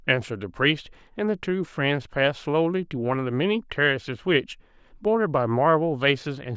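The speech recording has no audible technical faults anywhere in the clip.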